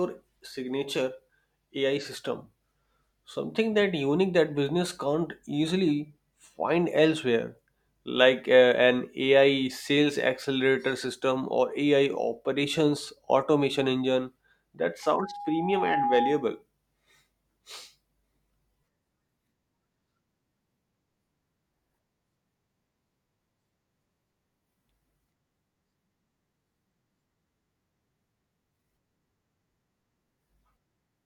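From 15.02 to 16.62 s, loudspeaker feedback squeal: the microphone re-amplifies its own loudspeaker, and an 821 Hz tone swells over about a second to roughly the speech level. A spectrogram shows one bright horizontal line thickening; the waveform envelope rises steadily.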